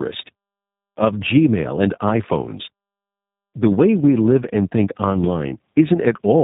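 Speech throughout suffers from tandem speech coding. It sounds like it crossed two low-rate speech codecs in a row, with iLBC and then G.729A likely. Each re-encodes the last one's errors. Nothing sits above 3.8 kHz, so it sounds muffled, rough and warbly.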